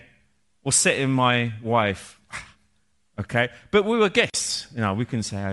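A speech clip with plainly audible transform-codec damage throughout: the upper spectrum sounds thinned and replaced by noise fill, giving the voice a breathy, grainy edge. This is likely Bluetooth LC3 compression, and fits a 10 ms frame at roughly 48 kbps.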